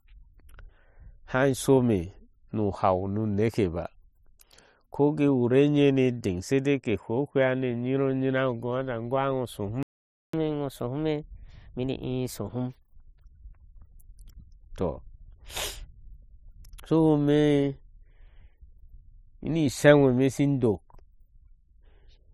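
The player most likely ran short of buffered data or had its thread blocked, producing a playback stall from 9.83 to 10.33 s: the speech cuts off mid-flow and the output falls silent for about half a second (0.51 s) before resuming. To recover the lost time, the player then resamples its backlog at 1.15 times normal speed, a catch-up at higher speed from 10.33 to 13.33 s. For those three seconds the speech runs noticeably faster and sits roughly two semitones higher in pitch, then drops back to its normal rate and pitch.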